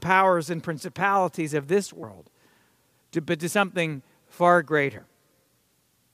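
At 2.02 s, right after "and principalities of this", there's a short blip, and another from 4.97 to 4.99 s after "but to something far". Both are damaged data in the compressed stream: corrupted bytes make the decoder misread frames and lose sync briefly.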